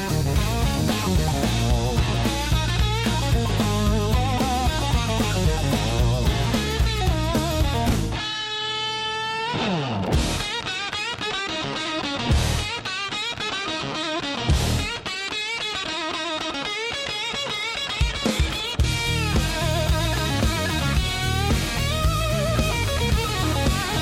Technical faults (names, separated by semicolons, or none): none